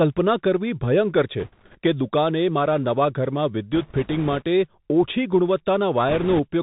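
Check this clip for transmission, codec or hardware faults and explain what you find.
Two faults are present: the whole speech clip comes through a Bluetooth headset link, and that link suffers bursts of bit errors.

Bluetooth CVSD headset codec, throughout: one-bit delta coding at 64 kbps leaves nothing above 4 kHz, with scratchy s sounds and a granular hiss under the speech.

Bit errors on a Bluetooth voice link, at 1.40–1.78 s (after "ભયંકર છે", before "કે દુકાને મારા"), 3.73–4.43 s and 6.09–6.40 s: flipped bits, at an error rate of around 3 to 5 percent, scatter small step errors that decay quickly. The result is a rushing crackle rather than loud clicks, and it is heaviest in the last burst.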